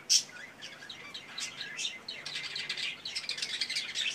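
Nothing goes wrong anywhere in this one; the sound simply runs its course without a single technical hiccup to point out.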